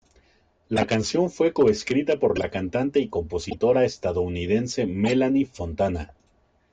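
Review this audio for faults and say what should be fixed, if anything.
A decoder is playing compressed frames whose bits were damaged in storage or transit instead of concealing them, and in this speech each one comes out as a brief chirp or burst of misplaced noise. The corrupt frame decoded fault hits at 0.76–0.84 s just before "canción fue coescrita por", 2.36–2.44 s before "cantante y", 3.50–3.55 s after it, and 5.05–5.09 s. Each lasts a few frames. Checksum validation with error concealment would prevent it.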